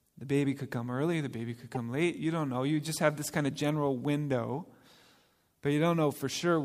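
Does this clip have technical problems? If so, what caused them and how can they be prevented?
Yes. At 1.75 to 1.77 s, just after "early the baby could", there is a brief chirp-like blip: a corrupt frame decoded. Bits inside a single compressed frame were damaged in transit or storage, and the decoder played it without detecting the error. Misread gains and coefficients placed energy at the wrong frequencies for that frame's duration, peaking at around -25 dBFS. To prevent it, add checksums or error detection so damaged frames are concealed rather than decoded.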